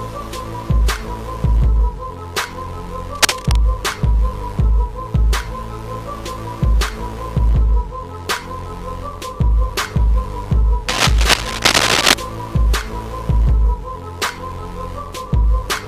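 Two bursts of scratchy, rustling noise cut across the sound, from 3.15 to 3.56 s and again for longer from 10.88 to 12.14 s, each roughly as loud as the sound itself. This is cable scratch noise, most likely from a worn cable, connector or control being moved, so its contact resistance fluctuated quickly and added dense, irregular crackle on top of the signal for as long as it was disturbed.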